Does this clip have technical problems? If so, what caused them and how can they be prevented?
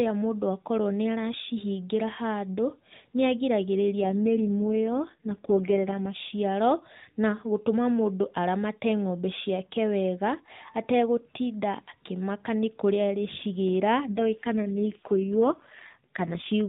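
Yes. An AMR rate drop at 4.02–6.20 s and 14.06–16.47 s makes the speech rougher and more synthetic, which fits the codec falling from 12.2 to 4.75 kbps. Unlike a dropout or bandwidth switch, there is no gap and no change in audio bandwidth. A stronger radio link prevents the network from forcing the lower rate.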